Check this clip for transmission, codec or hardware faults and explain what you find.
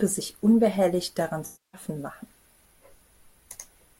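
One transmission fault: AAC frame loss with concealment, from 1.45 s to 1.81 s in this speech clip. A run of consecutive AAC frames failed to reach the decoder, about 0.28 s of coded audio, which fits roughly a dozen frames. The decoder bridged the gap by reusing the last good spectrum with randomised signs and fading it as the loss continued. The result is a smeared, noisy patch where the speech dissolves into a hollow wash, decays, then fades back in.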